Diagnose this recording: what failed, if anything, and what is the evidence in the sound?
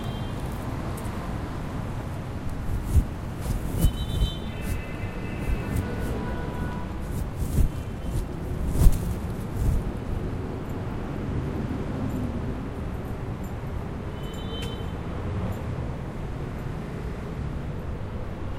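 Compressed frames skipped, at the codec or storage stage: the sound jumps forward at 2.35, 4.61, 6.91 and 10.24 s. Whole frames, each about 42.7 ms, went missing from the file or the decoder rejected them, losing roughly 300 ms at 2.35 and 10.24 s and roughly 150 ms at the other two.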